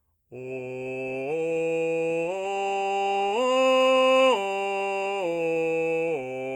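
No technical faults can be heard in this piece of music. There is nothing in it to place on the timeline or trace to a cause.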